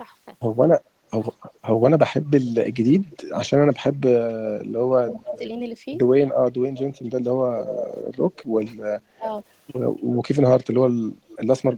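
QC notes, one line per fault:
0.65–0.82 s, 5.0–5.4 s and 9.16–9.46 s, speech suppressed in double talk: the speech dips by about 20 to 25 dB, likely an echo canceller ducking while both sides talk.
1.55–4.01 s, 5.08–5.38 s, 6.49–8.74 s and 10.15–11.77 s, echo leak: a copy of the speech returns about 270 to 290 ms late, likely loudspeaker pickup the canceller missed. It sits about 10 to 25 dB below the speech.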